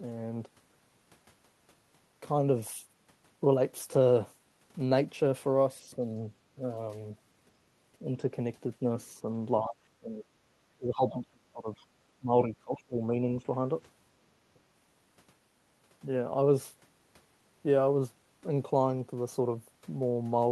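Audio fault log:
5.82–13.49 s, speech suppressed in double talk: The speech dips five times, at 5.82–6.01, 6.58–6.63, 9.62–10.25, 10.77–11.70 and 12.19–13.49 s. The mild dips are around 5–10 dB and the deep ones reach roughly 20–25 dB. The likely cause is an echo canceller that could not separate near and far talkers, so it attenuated both.
11.77–11.86 s, other side's voice leaking through: A brief, very faint scrap of a second voice sits roughly 35 dB below the main speech. It is most likely loudspeaker playback picked up by the microphone that the echo canceller failed to subtract fully.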